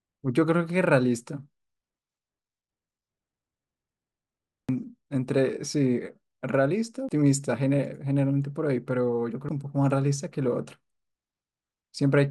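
Audio missing between chunks at 4.69, 7.09 and 9.49 s: the speech skips forward abruptly, losing roughly a tenth of a second each time, with the two sides butted together. The regular spacing likely reflects a recorder dropping audio as it closes one 2.5-second chunk and opens the next.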